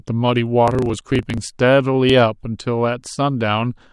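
From 0.64 to 1.38 s, a block size mismatch (truncated) discards the tail of each 1024-sample block. The speech runs 1.16 times fast with a 27.2 Hz buzz, seen as evenly spaced waveform seams.

At 2.10 s a slight jump, a vertical spectrogram line, is likely a dropped buffer (overrun) that lost a few milliseconds of audio.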